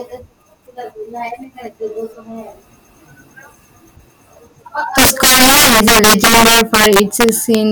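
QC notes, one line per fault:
4.98 to 7.55 s, integer overflow: the speech is driven about 11 dB past full scale, and each over-limit peak wraps to the opposite sign instead of flattening. The result is violent, sharp cracks on loud syllables rather than the duller, buzzy distortion of clipping.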